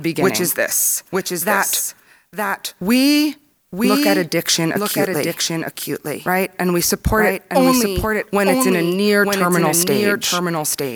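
Throughout runs a doubled audio track, likely from a second capture path or a misaligned edit. The speech repeats about a second later, somewhat quieter, with no echo-like decay.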